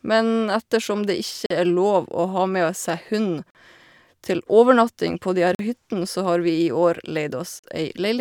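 Speech here, and it's got a clear gap between chunks problem: four hard-edged holes of about 44 ms each, at 1.46–1.50 s, 3.50–3.55 s, 5.55–5.59 s and 7.59–7.64 s. They recur roughly every two seconds, which points to the audio being handled in 2-second chunks with a bit of silence dropped in at every join. Nothing gets lost, but the speech stops dead for a moment at each boundary.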